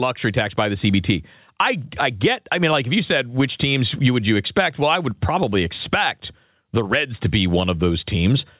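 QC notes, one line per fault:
Throughout, gain pumping: loud and soft parts end up closer in level and the sound is squashed, with the level swinging by around 10 dB. This is likely caused by input gain set far too high and a fast limiter or compressor clamping on each loud syllable. Unlike a noise gate, the floor never cuts to silence, and unlike slow level drift, the ducking tracks each syllable. The telephone-band sound, with nothing above 4 kHz, comes from the call path.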